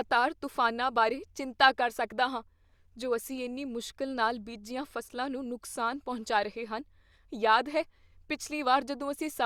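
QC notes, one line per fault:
No faults turned up anywhere in this one, so there's nothing to log for it.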